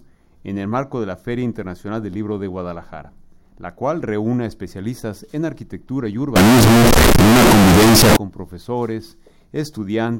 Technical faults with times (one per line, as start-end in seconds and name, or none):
6.36-8.16 float read as integer